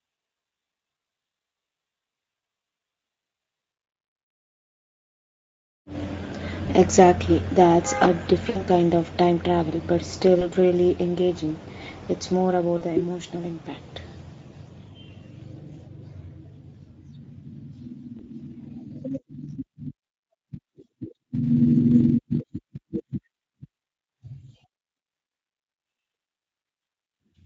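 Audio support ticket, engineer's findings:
Speex codec, whole clip (0 to 27 s). Speech sounds hoarse and grainy with a noisy edge, and the damage is plainly audible. Component: the VoIP speech encoder. This CELP codec has a thin excitation budget at this setting, so the residual is coded coarsely and the voice turns rough. The level of damage fits a middle setting of around 16.8 kbps. Any content above 4 kHz is a shaped noise fill, not real detail.

VoIP packet loss concealed by the speech codec, at 6.65 to 6.70 s, 8.49 to 8.62 s, 10.39 to 10.47 s, 12.77 to 12.84 s and 18.17 to 18.28 s. Each gap is brief. Audio smears into a buzzy tone or coloured noise that fades out. Lost audio runs 20 ms, 60 ms, 20 ms, 40 ms and 20 ms. Component: lost packets and decoder concealment. The decoder repeats its last pitch and filter with a falling gain, and the voice stays weak for a short time after packets resume.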